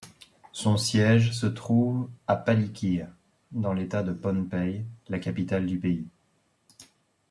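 No technical faults occur at any point in this speech recording, so there is nothing to describe in time order.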